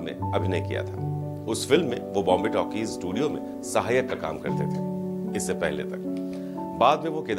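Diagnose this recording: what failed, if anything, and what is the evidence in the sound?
Nothing in the recording points to a failure. No stage of the chain, from the analogue wiring through to playback, leaves an audible sign of having gone wrong.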